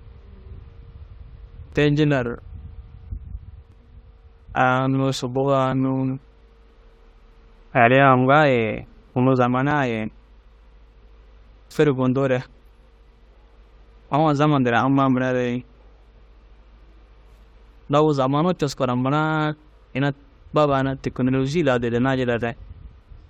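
From 1.73 s to about 11.7 s the speech carries a string of evenly spaced ticks, roughly one every 1.99 s, about seven in all. Each is a periodic USB or driver dropout: something stalls the USB bus or audio driver on a fixed cycle, and around 10 ms of audio is skipped outright rather than filled with silence. The splice joins two mismatched waveform points, producing a brief click that registers only while sound is present.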